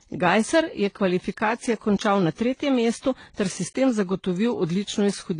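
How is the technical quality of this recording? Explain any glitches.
The quality is compromised for the whole clip. The speech carries layered compression damage consistent with transcoding between lossy codecs: the artefacts of both codecs heard together and a dull top with nothing above 9.8 kHz. The likely cause is a low-rate HE-AAC pass re-encoded to AAC-LC. The second encoder spent bits reproducing the first one's artefacts and added its own. On a spectrogram this appears as a hard ceiling at 9.8 kHz with patchy, blocky high-frequency texture beneath it.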